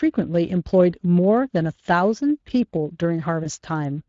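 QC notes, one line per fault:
Throughout: Speex codec. The coding damage is plainly audible. The speech has a grainy, hoarse edge, and the voice sounds roughened rather than clean. That is CELP coding running short of bits for the excitation signal, so the codec rebuilds the voice from an approximate pulse pattern and the fine detail between harmonics turns to noise. The amount of damage fits a Speex mode of roughly 20 kbps.
3.43–3.49 s: VoIP packet loss concealed by the speech codec. For about 60 ms the voice stretches into a held sound that sags in level, then takes a moment to settle back. The gap itself fits one lost 20 ms frame. The decoder filled it by repeating its last pitch and filter with falling gain, and because each frame builds on the previous one, the wobble runs on past the missing stretch.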